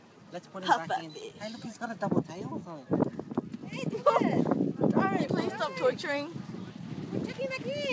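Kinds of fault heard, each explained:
No kinds of fault are heard in this clip.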